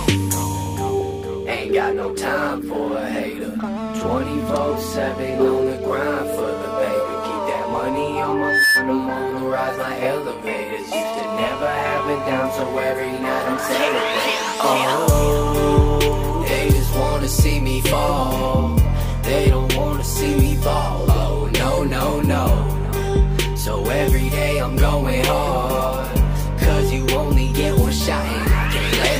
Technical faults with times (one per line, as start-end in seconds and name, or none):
8.36-8.90 loudspeaker feedback squeal